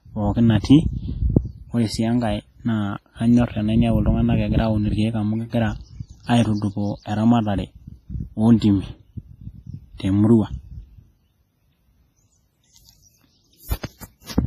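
Throughout the speech, a low-bitrate transform codec, likely WMA compression, has quantised the signal coarsely. Nothing survives above 15.3 kHz, and the heavy coding damage leaves a ringing, washy smear with hiss that breathes along with the voice.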